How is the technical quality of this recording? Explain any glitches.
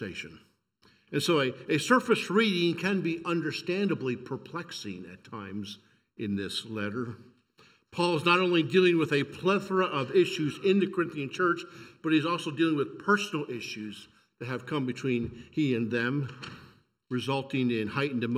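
The recording has one fault, present from start to finish: channel delay (comb filtering). One channel arrives less than a millisecond late, and the mono sum cancels evenly spaced frequencies, the first near 700 Hz. The result is a hollow, phasey sound whose notches never move, unlike a flanger's sweep.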